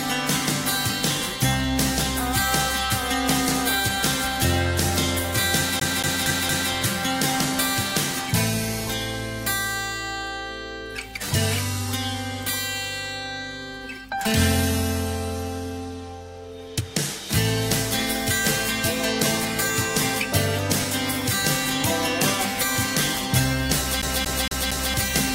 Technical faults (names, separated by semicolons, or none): CD stuck on one turn